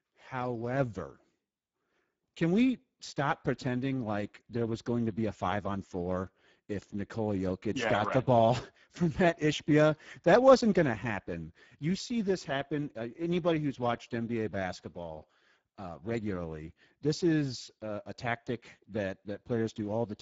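Speech, damaged throughout by plainly audible Speex codec artefacts: hoarse, noisy voicing consistent with roughly 10 kbps, and a spectrogram showing smeared noise-like texture and nothing above 7.7 kHz.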